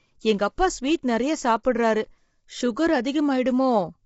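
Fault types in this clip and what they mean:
Low-delay AAC compression: the speech sounds rough and grainy throughout, with a hiss-like fill between the harmonics and nothing above about 7.7 kHz, so the top end feels dull. This is likely the low-delay AAC used in video calls, whose very short frames resolve pitch harmonics poorly and spend bits inefficiently; the plainly audible damage fits a low bitrate in the region of 24 kbps.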